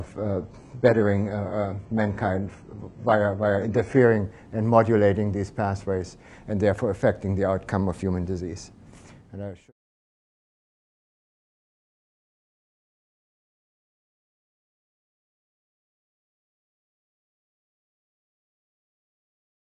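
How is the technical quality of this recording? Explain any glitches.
The first four seconds are degraded, after which quality improves. The cause is an adaptive stream starting at a low bitrate. From 0.0 to 4.0 s the player runs a cheap version while gauging the connection, giving dull or synthetic treble and smeary artefacts, which fits a very low-bitrate HE-AAC stream. At 4.0 s quality jumps with no gap, consistent with a switch to AAC-LC at around 96 kbit/s. A spectrogram shows a thin, patchy top band that abruptly fills out at 4.0 s.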